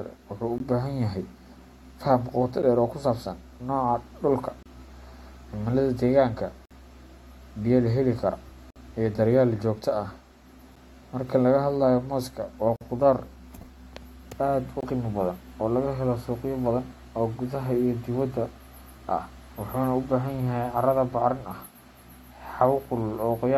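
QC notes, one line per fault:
0.58, 2.62, 4.63, 6.65, 8.70, 10.76, 12.76, 14.81 s: gap between stream segments. Every 2 s, segment timestamps leave holes of 8 to 54 ms, filled with silence. Flat-line waveform gaps with hard edges show as vertical blank stripes on the spectrogram.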